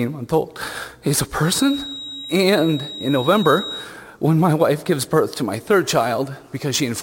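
A feedback whistle runs from 1.41 s to 3.91 s: a thin, steady tone near 3.8 kHz sits behind the audio, roughly 15 dB below it and wavering slightly in level. The likely cause is a loudspeaker-to-microphone loop running just at the edge of instability, so this one frequency keeps ringing at a held level rather than building into a runaway howl, then drops away at 3.91 s.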